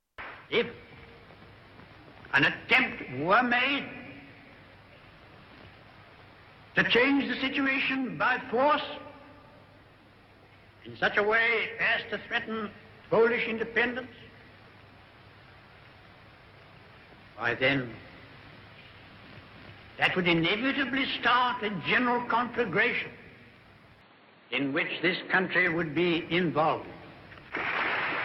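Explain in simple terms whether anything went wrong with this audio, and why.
Something did go wrong from 24.01 to 25.67 s. The sound suddenly turns dull and boxy, losing everything above 4.5 kHz, with a faint new background hiss but no gap or jump in loudness. That's most likely the input switched to a poorer device.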